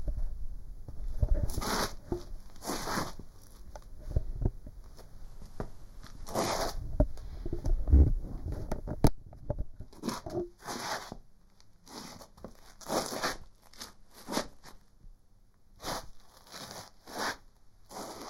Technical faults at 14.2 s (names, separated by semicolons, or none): channel delay (comb filtering); Bluetooth SBC bit pool drop